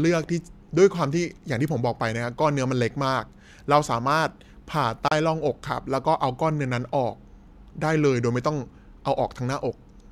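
Speech recording with one glitch: at about 5.08 to 5.12 s there's a short burst of damaged data in the compressed stream. For those roughly 36 ms the decoder is fed bytes that don't make sense as a valid frame, so it misreads those frames instead of playing the audio that belongs there, then loses its place and has to hunt for the next good frame header before playback settles again.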